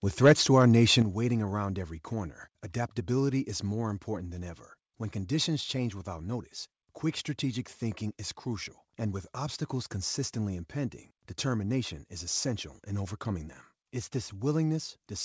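Microphone volume stepped down at 1.02 s: the speech and its background drop together by about 8 dB in a single step. This is likely the call software turning down the microphone's input volume because it judged the level too hot, all heard through a band-limited path with nothing above 8 kHz.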